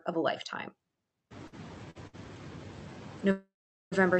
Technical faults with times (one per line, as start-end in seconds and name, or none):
0.00-4.19 noise suppressor artifacts
1.47-1.54 short stall from a late packet
1.90-2.15 short stall from a late packet
3.31-3.94 call audio freeze